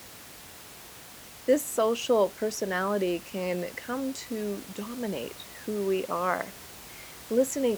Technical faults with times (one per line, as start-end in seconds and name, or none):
none